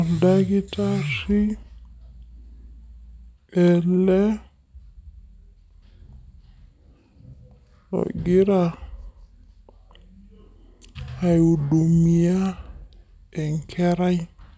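Throughout, a wrong sample rate, fitting 22 kHz audio played at 16 kHz, slows speech to 0.73 speed and drops it 5.5 semitones, low and dragging.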